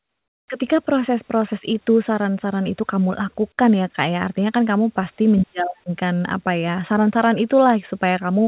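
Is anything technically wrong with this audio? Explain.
Yes. From 0.00 to 0.48 s, the opening background is replaced by comfort noise. The likely cause is discontinuous transmission: with no speech detected, the sender stops sending audio, and the receiver fills the gap with synthetic noise loosely matched to the real background. The natural room sound, already about 44 dB below the loudest parts, becomes a flat, featureless hiss about 22 dB quieter, until the real background returns at 0.48 s. Across the clip, nothing is heard above 4 kHz, which fits the narrowband G.711 call codec.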